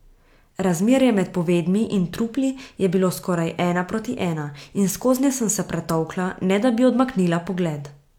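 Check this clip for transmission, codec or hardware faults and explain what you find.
Nothing stands out here: the speech comes through without any transmission, codec or hardware trouble that I can hear.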